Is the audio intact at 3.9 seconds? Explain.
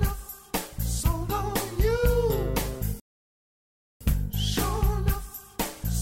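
No. At 3.9 seconds the audio is inside a playback stall running from 3.00 to 4.01 s. The sound stops mid-flow and stays silent for about one second. The player likely ran out of data or was blocked. Sound resumes at 4.01 s.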